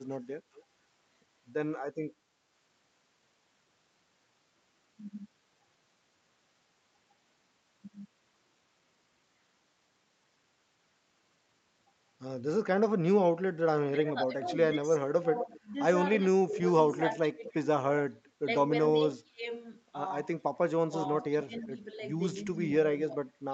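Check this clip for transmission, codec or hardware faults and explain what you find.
Two kinds of fault show up, both coming back from the far end of a call. The Opus path tops out around 8 kHz, which is expected.

Echo leak at 0.56–0.63 s, 14.46–15.46 s, 16.52–18.02 s and 21.43–22.57 s: a delayed copy, roughly 240–260 ms late, trails the speech. Likely an echo canceller letting loudspeaker pickup through. It's faint at first, then loud (about 10–15 dB down) mid-clip.

Speech suppressed in double talk from 13.9 to 19.46 s, 20.86 to 21.61 s and 22.54 s to the end: the voice dips by up to about 25 dB in patches, likely because the canceller ducked both talkers at once.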